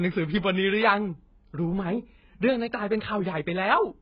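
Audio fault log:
Throughout, AAC compression: the speech sounds dull and muffled, with nothing above 5 kHz, and sibilants and held vowels carry a warbling, fizzy smear. This is likely heavy AAC-LC coding. With too few bits to spend, the encoder lowers its cut-off and coarsely quantises the remaining frequency lines frame by frame, leaving gaps in the spectrum that come and go. The depth of the damage points to a very low bitrate, around 12 kbps.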